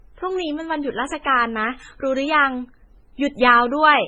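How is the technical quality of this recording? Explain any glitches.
The recording is compromised throughout by layered compression damage. Transcoding between lossy codecs is the likely cause, running the full clip: the speech sounds as if it was squeezed hard by a low-rate MP3 stage, around 16 kbit/s, then re-encoded as HE-AAC at about 48 kbit/s. The second encoder spends its bits preserving the first one's artefacts while adding its own. Both sets of artefacts are heard at once, and nothing remains above 20.3 kHz.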